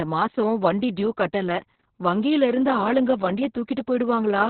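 Throughout, the speech sounds muffled, hoarse and faintly robotic with nothing above 4.3 kHz, from heavy narrowband Opus voice compression consistent with roughly 6 kbps.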